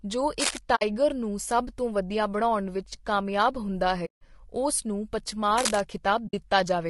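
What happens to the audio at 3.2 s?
At 3.2 s the speech has the same rough, grainy texture it carries for the whole clip, with a noise-like fill between the harmonics and a thin, artificial-sounding top band. This is likely low-delay AAC compression, as used for video calls: its short frames resolve pitch harmonics poorly and leave few bits to spare, so the coder smears energy between them. The damage is plainly audible, which fits a bitrate of about 32 kbps.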